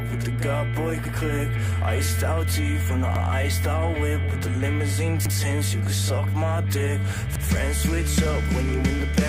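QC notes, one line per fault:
1.06, 3.16, 5.26 and 7.36 s: overlapping chunks. The audio arrives in 2 s chunks, and each one starts 100 ms before the previous one ended. That 100 ms segment plays twice at every join, giving a regular stutter with a click at each seam.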